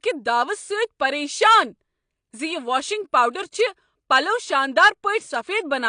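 From start to finish the speech is dulled, with nothing above about 9.8 kHz and a watery, warbling smear on sustained sounds and sibilants, likely from AAC compression at a low bitrate, roughly what 32 kbps AAC-LC would give. The codec quantises each frame's spectrum coarsely, dropping and refilling bands. That fizzy, shifting texture is what separates it from a plain low-pass filter, which would dull the top end but leave what remains clean.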